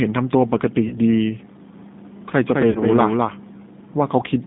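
Throughout, the speech sounds plainly rough and slightly synthetic, confined to roughly 150 Hz to 3.7 kHz. That is the G.729 codec at work, rebuilding each short frame from a vocal tract filter, a pitch predictor and a few pulses, consistent with 8 kbit/s.

From 0.88 to 1.00 s, and again from 2.71 to 2.84 s, the sound smears into a buzzy tone or coloured noise that fades, and then stays weak or distorted briefly. This is VoIP packet loss concealed by the speech codec. The first gap fits one 20 ms packet and the second fits two packets totalling 40 ms. The decoder stretched its last pitch and filter with falling gain, and recovery lags because each frame builds on the previous one.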